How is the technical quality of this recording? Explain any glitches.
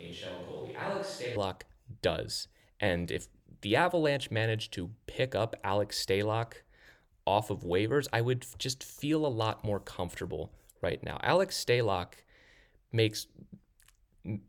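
One glitch, right at the start. From the very beginning to about 1.36 s the sound is roomy and hollow, thinner in the bass, about 10 dB quieter, with room noise roughly 30 dB below the speech. That's likely a switch to a distant microphone: the close mic's feed was missing and a farther one filled in, so the sound jumps back to close and full at 1.36 s.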